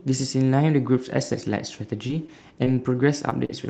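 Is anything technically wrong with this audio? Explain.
Yes. There is short concealed packet loss at 2.07–2.11 s, 2.27–2.30 s, 2.64–2.68 s, 3.30–3.33 s and 3.45–3.51 s, in speech carried over a call path that is band-limited to about 8 kHz. Around 20 ms of audio failed to arrive in time at each point, and about 40 ms at the last. The receiver covered each gap by extending the preceding sound and then crossfading back, so it comes through as a quick smear or wobble.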